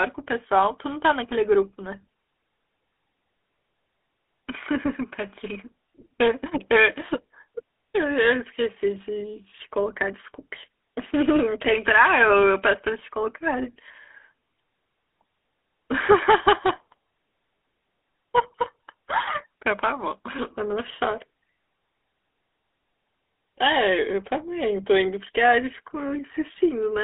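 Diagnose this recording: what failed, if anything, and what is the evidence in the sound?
Codec stage: GSM full-rate coding throughout leaves the speech buzzy and gravelly, consistent with 13 kbps pulse-excited coding; a spectrogram shows energy confined to 300 Hz–3.5 kHz.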